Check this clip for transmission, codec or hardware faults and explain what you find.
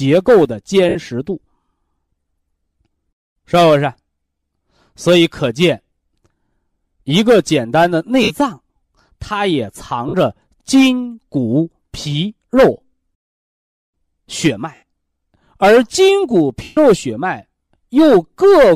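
There is one transmission fault in this speech: five short dropouts of lost LE Audio frames, heard over light codec compression.

Lost LE Audio frames at 0.89–0.96 s (60 ms), 8.23–8.31 s (67.5 ms), 10.08–10.15 s (52.5 ms), 14.74–14.83 s (82.5 ms) and 16.63–16.77 s (135 ms). Each sounds like a brief noisy smear, and the longest one sinks toward silence. The Bluetooth link dropped frames, and the LC3 decoder filled each gap by repeating the last spectrum with scrambled signs, fading it as the gap lengthened.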